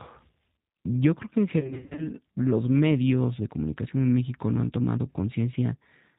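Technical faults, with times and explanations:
Throughout: G.729 codec. The 8 kbit/s coding rebuilds the speech from a vocal-tract filter, a pitch predictor and a few pulses per subframe, so the damage is plainly audible: a rough, slightly synthetic texture, with nothing above 4 kHz.
1.60–2.08 s: VoIP packet loss concealed by the speech codec. After "creo que en", about 260 ms of audio drops out in short gaps spread over roughly 380 ms, the longest being 40 ms. The decoder fills each gap by extending the last pitch and filter at falling gain, giving buzzy or noisy, fading patches that persist until "los medios de comunicación".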